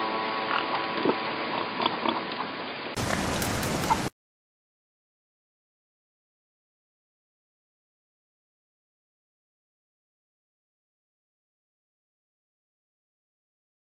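The recording likely began on a poorer input device, such as a headset in its call profile, before the system switched to a better one at about 2.97 s. From the start to that point the sound is boxy and dull, with nothing above 4.9 kHz, a little quieter than what follows, and carries its own background noise well below the signal. A brief gap of about 20 ms marks the switch, after which the fuller sound returns.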